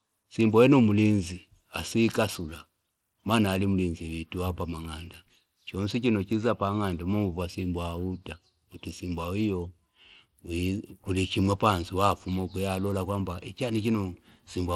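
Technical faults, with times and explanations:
Throughout, Bluetooth SBC compression: the speech has a dull top end whose treble flickers in and out, with a gritty edge on the sound. This is likely SBC at a small bit pool, which fits about 96 kbps, starving the upper sub-bands and coarsely quantising the rest.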